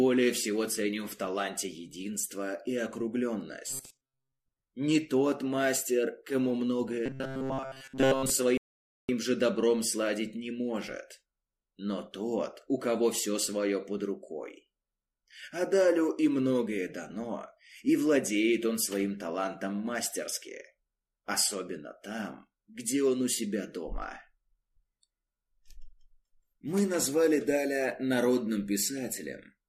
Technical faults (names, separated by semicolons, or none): robotic sound from repeated short buffers; rebuffering stall